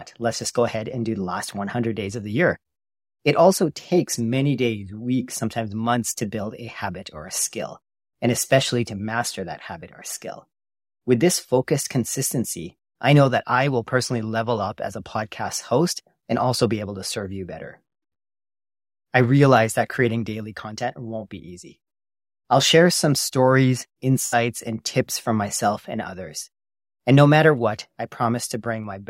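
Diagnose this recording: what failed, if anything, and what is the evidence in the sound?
A brief smeared, noisy and phasey patch breaks the speech between 24.26 and 24.35 s, right after "I'll share some stories" and before "and tips from myself". This is AAC frame loss with concealment at the codec stage. Roughly 64 ms of coded audio never reached the decoder, which fits about three lost frames. The decoder rebuilt the gap from the last good spectrum, so the hole is replaced by that smeared texture.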